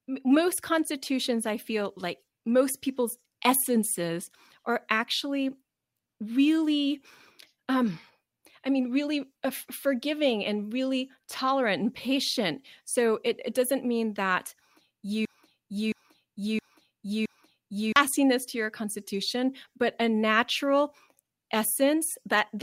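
From 15.25 s to 17.96 s a broken-record loop repeats a 0.67 s fragment exactly, back to back, four times, losing the audio that belonged there before "to your constitution but". The likely cause is a stalled player or stream resending its last fragment.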